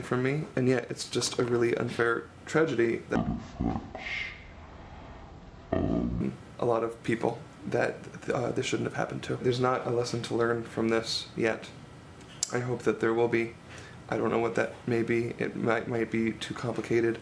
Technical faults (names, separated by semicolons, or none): wrong sample rate